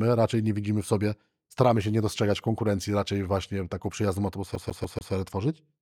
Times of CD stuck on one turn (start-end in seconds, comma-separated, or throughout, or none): 4.55-5.13